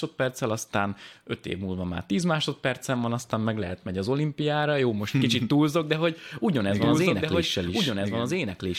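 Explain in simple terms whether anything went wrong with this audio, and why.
From 6.77 s, after "túlzok de hogy ugyanez", a doubled audio track begins: a slightly quieter copy lags about 1.5 s, not fading like an echo, likely from a second capture.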